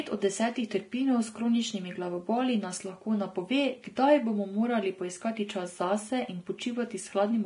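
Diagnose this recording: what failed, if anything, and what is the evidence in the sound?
The codec stage is the likely point of failure, with Vorbis compression applied heavily across the whole of the speech. From start to finish, nothing is present above 10.6 kHz, and the remaining treble is hissy and grainy, with roughened tones and softened consonant attacks. At a low bitrate, which this sound points to being around 30 kbps, the encoder lowers its cut-off and quantises the upper residue so coarsely that detail is replaced by noise of similar energy.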